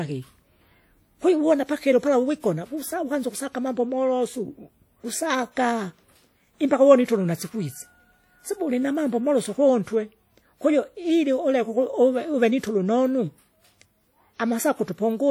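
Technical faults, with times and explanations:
throughout, WMA compression. The speech carries plainly audible codec damage. Onsets and consonants sound smeared and washy, with ringing around them. A thin hiss rises and falls with the speech. This is likely a WMA transform encoder at a low bitrate, and the sound fits 48 kbps. Long transform blocks spread quantisation noise across tens of milliseconds, and weak spectral detail is discarded. The content still reaches 20.1 kHz.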